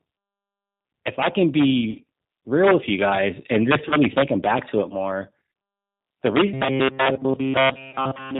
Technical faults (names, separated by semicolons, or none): G.729 codec; VoIP packet loss concealed by the speech codec; robotic sound from repeated short buffers